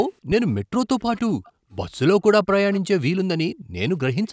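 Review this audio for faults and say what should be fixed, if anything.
A phantom power thump sits at 0.32 to 0.78 s. A supply was switched on a live input, and the voltage step went through the coupling capacitors. The result is a deep low thump. Its main energy falls away in about 0.1 s, with a tail lasting to 0.78 s. To prevent it, mute the channel before switching phantom power, and unmute only after the input settles.

An echo leak appears at 0.99 to 1.2 s, 1.44 to 1.51 s, 1.7 to 1.75 s, 2.72 to 2.81 s and 4.26 to 4.31 s. Each time, a faint copy of the speech returns 281 ms late. It is quiet, roughly 25 to 40 dB under the speech, and comes in short scraps. The likely cause is a far end playing the call on a loudspeaker. Its echo canceller let some of that playback through its microphone and sent it back. To prevent it, the far end should use a headset or turn down its speaker.

The background is gated by the echo canceller at 3.54 to 3.75 s. 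The room sound drops sharply, by as much as about 40 dB, for about a fifth of a second. It then returns. The canceller clamped the microphone hard while the loudspeaker was playing. To prevent it, ease the canceller's suppression so the room tone stays steady.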